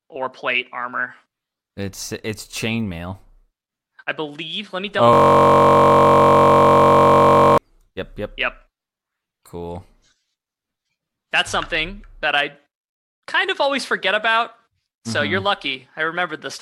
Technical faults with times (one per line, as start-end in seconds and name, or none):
5.13-7.58 system hang loop